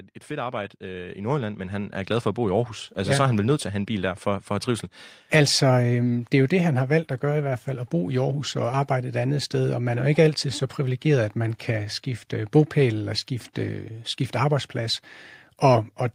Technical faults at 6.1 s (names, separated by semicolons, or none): none